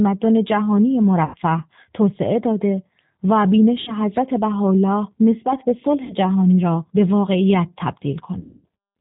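Throughout, the speech carries plainly audible G.729 codec damage at 8 kbit/s. Nothing above 4 kHz survives, and the voice sounds rough and synthetic.

VoIP packet loss concealed by the speech codec strikes at 1.25–1.37, 3.81–3.93, 6.04–6.15 and 8.40–8.66 s. Gaps of 90, 60, 60 and 240 ms become fading buzzy tones or coloured noise.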